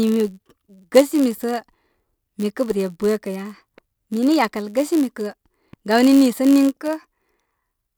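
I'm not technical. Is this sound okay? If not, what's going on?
No, it isn't quite right. Running through the whole speech clip is a low, steady buzz, pulsing about 100 times a second. That's a block size mismatch (padded). One step in the audio chain hands over chunks slightly smaller than the next step expects, and the missing bit of each chunk gets filled with silence. Those tiny regular gaps make the buzz, and they also stretch the speech a touch, running at about 0.996 of normal speed.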